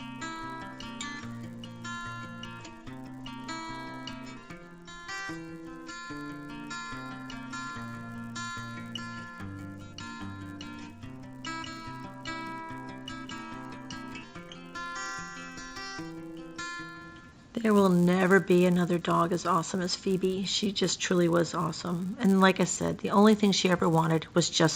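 Throughout, the resampler restarted on every block. Each 10 ms block was converted from 16 kHz to 48 kHz separately, leaving edge errors heard as a 100 Hz buzz whenever sound plays.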